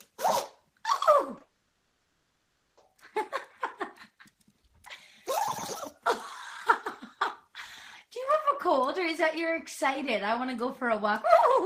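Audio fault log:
1.36–1.41 s, short concealed packet loss: two gaps of 10 ms and 20 ms were patched by extending the preceding sound and then blending back into the real audio, heard as a quick smear or wobble. On a spectrogram, the harmonics or noise briefly repeat unchanged; the waveform shows a smooth, repetitive splice.
1.43–2.78 s, long network dropout: for about 1.34 s the last sound is stretched into a fading buzz or hiss that never reaches full silence, then real audio resumes with that stretch missing. The likely cause is an extended loss of arriving packets. On a spectrogram, frozen, smeared bands gradually lose energy; the waveform shows a decaying, featureless envelope.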